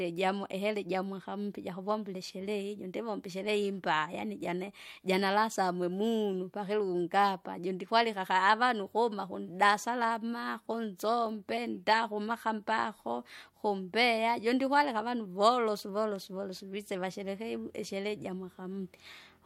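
Nothing technical goes wrong anywhere in this speech recording, so there's no fault to point to at any moment along the way.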